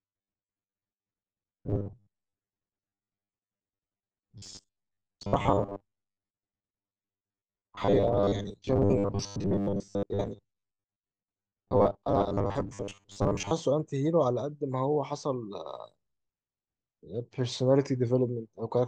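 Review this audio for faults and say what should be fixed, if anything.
From 0.01 to 13.52 s there's robotic sound from repeated short buffers: a rigid 100 Hz buzz, likely about half the audio replaced by repeated 10 ms chunks. Keep the input buffer fed steadily or give it more headroom so playback never has to loop old audio.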